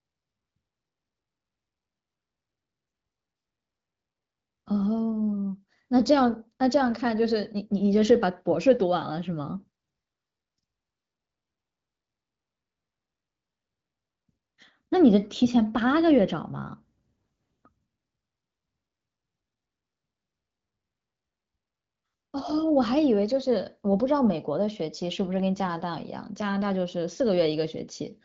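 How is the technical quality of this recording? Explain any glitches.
There are no glitches to explain here; the speech comes through the AMR wideband (HD Voice) codec at 15.85 kbit/s, a rate comfortably high enough that the light coding it leaves behind doesn't amount to a fault.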